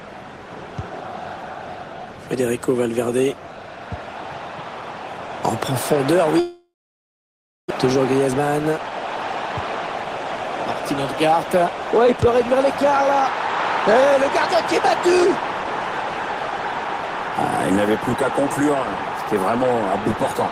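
From 6.39 to 7.72 s the sound trails off into a fading buzz and then silence, and about 1 s of audio never returns. This is likely a long network dropout.

Three stretches then run faster at unchanged pitch: 8.14 to 10.04 s at 104% speed, and 11.25 to 15.26 s and 17.71 to 20.51 s at 102%. This is jitter buffer speed-up. The receiver trimmed tiny pitch-period slices, roughly a tenth of a second in each of the first two stretches and half that in the last, to shrink excess buffered delay.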